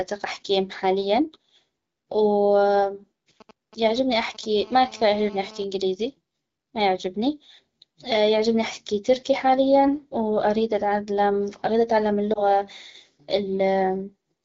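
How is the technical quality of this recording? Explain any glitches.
The recording has three interference and transmission faults, all brief, heard over clear wideband speech whose light codec colouring fits AMR wideband (HD Voice) at around 12.65 kbit/s.

From 3.41 to 4.45 s, GSM signalling bursts appear: a nearby 2G phone exchanging short radio bursts with the network, which the audio circuitry rectifies. They sound like a galloping dit-dit-dit of short 217 Hz buzzes, roughly 25 dB below the speech. On a spectrogram they form clustered vertical striations with harmonic combs.

From 4.57 to 5.64 s comes GSM phone buzz, as the phone transmits continuously at a 217 Hz burst rate during a call and the circuit demodulates each pulse. The result is a hard, raspy buzz about 22 dB below the speech. A spectrogram shows evenly spaced horizontal harmonics stacked at 217 Hz multiples, and the waveform shows a regular ripple repeating 217 times a second.

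At 12.33 to 12.43 s there are lost AMR speech frames: a single 20 ms frame failed its checksum, and the decoder bridged the gap with the previous frame's pitch and spectral settings at reduced gain. This is heard as a brief dip or warble. A spectrogram shows a short smeared, dimmer patch.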